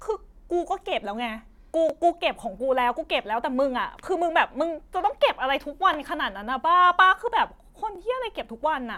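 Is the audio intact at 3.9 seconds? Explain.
No, there is an overlapping-chunks fault at about 3.92 s. The speech was handled in 2-second chunks, and this one begins before the previous one ended, so a 20 ms slice plays twice at the join. It comes through as a brief click or stutter.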